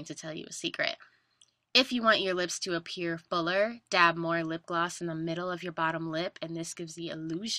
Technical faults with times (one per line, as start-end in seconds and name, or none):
none